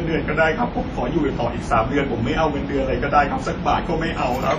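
Throughout, the speech sounds washy and ringing, with hiss breathing alongside it and nothing above 13.8 kHz. This is likely heavy WMA compression at a low bitrate, around 32 kbps.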